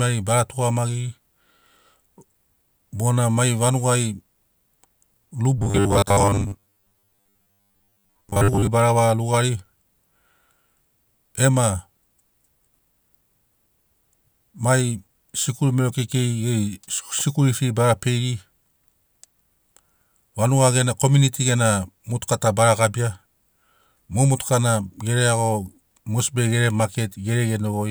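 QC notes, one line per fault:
5.58–8.69 s, robotic sound from repeated short buffers: speech becomes a rigid metallic buzz fixed at 100 Hz, loosely following the words, likely from late-arriving audio, with a segment of about 10 ms looped in place of most of the real signal.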